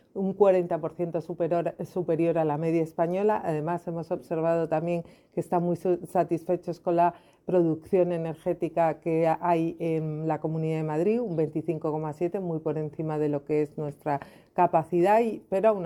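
No technical faults can be heard anywhere in this recording. There is no point at which the sound breaks, jumps or changes character.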